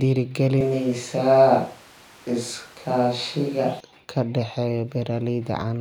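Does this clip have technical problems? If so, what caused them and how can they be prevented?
Yes. From 0.61 to 3.80 s the speech turns abruptly roomy and hollow, with thinner bass and room noise about 30 dB below it, then snaps back. This is likely a switch to a distant microphone. Unlike added reverb, the room noise rises and falls with it, though the level stays about the same. Monitoring the close microphone and recording a backup lavalier track prevents this.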